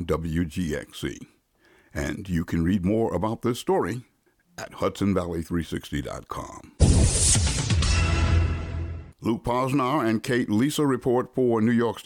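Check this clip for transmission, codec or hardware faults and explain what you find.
Nothing here sounds like a transmission, codec or hardware problem, so there's nothing to flag in this one.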